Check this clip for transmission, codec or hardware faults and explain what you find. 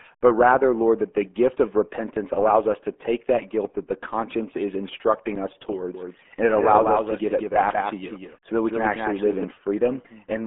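The speech carries a single fault, present across the whole clip: RealAudio 14.4 codec damage, and it is heavy. This dial-up era codec squeezes speech into a very low bit budget, consistent with roughly 8 kbit/s, by modelling the voice coarsely and discarding detail. The audio sits in a telephone-like band of about 250 Hz to 3.4 kHz, with nothing above 3.6 kHz. The result is muffled, gargly speech.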